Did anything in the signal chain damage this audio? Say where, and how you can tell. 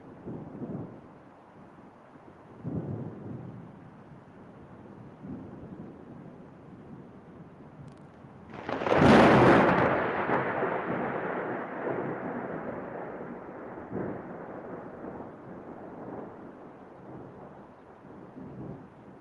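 No, nothing in the signal chain damaged this audio.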